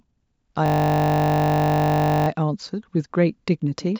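From 0.66 to 2.28 s a system hang loop freezes the speech. The same 20 ms slice repeats exactly, 81 times, giving a steady 50 Hz buzz rather than a choppy stutter. Unlike a dropout, it stalls the audio instead of cutting it, so essentially nothing is missing afterwards.

From 3.81 s to the end, feedback echo between two devices appears. A second device replays the speech into a nearby microphone, so it returns roughly every fifth of a second at up to about 9 dB below the speech. Each pass sounds thinner and more ringing, which sets it apart from ordinary room reverberation.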